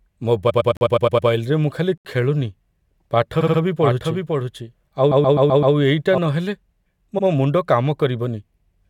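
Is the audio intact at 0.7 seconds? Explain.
No. The audio at 0.7 seconds sits inside a stretch of repeated frames that runs from 0.49 to 1.28 s. A short run of compressed frames, a block about 107 ms long, was delivered again and played seven extra times. The decoder replays the same fragment over and over, so the sound stutters. The repeats add about 0.75 s to the clip.

Just after that point, a block of digital silence falls inside the same stutter, from 0.77 to 0.81 s. For about 43 ms the sound drops to silence, which fits a 2048-sample buffer that was not filled in time. The sound cuts out with no fade and then returns abruptly, so this is heard as a short hole.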